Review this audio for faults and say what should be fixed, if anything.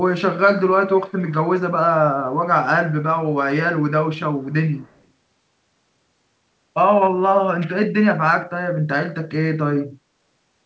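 Echo leak at 0.96–1.33, 4.16–4.20 and 4.41–5.04 s: a quiet copy of the speech returns 170 ms late, likely slipping past a speakerphone's echo canceller. To prevent it, use a headset on that side or retune its echo canceller so the loudspeaker output is fully removed from the microphone signal.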